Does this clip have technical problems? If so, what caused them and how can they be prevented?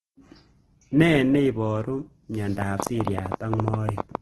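Yes. The whole clip carries Opus compression damage: the speech sounds rough and grainy, with a noisy texture where clean harmonics should be, and nothing above 12.2 kHz. This is likely heavy low-bitrate encoding, consistent with roughly 12 kbps in Opus's music mode, which keeps each band's energy but fills starved bands with folded or noise-like content. A spectrogram would show a flat ceiling at 12.2 kHz and smeared, speckled upper bands instead of crisp harmonic lines. Encoding at a higher bitrate, or in a mode suited to speech, prevents this.

From 2.62 s to 4.16 s there is a train of clicks, about 20 sharp ticks at roughly 11 per second, spaced unevenly and standing well above the speech, including in its gaps. The likely source is electrical interference or a faulty connection or power supply, which injects short pulses of similar shape. The waveform would show thin vertical spikes towering over the speech envelope, and a spectrogram would show them as narrow full-height stripes. 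Shielding cables, moving away from noisy equipment, or repairing faulty connections and power supplies prevents this.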